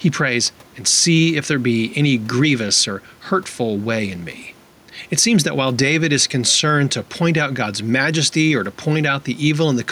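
A speech recording with gain pumping from start to finish: the gain swings by around 5 dB, and the room noise sits about 34 dB below the speech. That points to gain set far too high and a fast limiter or compressor likely clamping down on each peak. Unlike a noise gate, the background never cuts out, while loud and soft passages sit squashed together.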